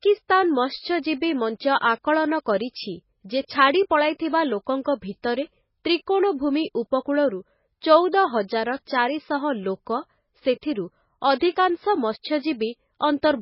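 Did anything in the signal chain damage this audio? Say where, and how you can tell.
Yes, at the codec stage, across the whole clip. Nothing survives above 5.6 kHz, and the speech sounds watery and swirly, with smeared onsets. That is likely heavy MP3 compression, which fits a very low bitrate near 16 kbps: weak frequency lines blink on and off between frames.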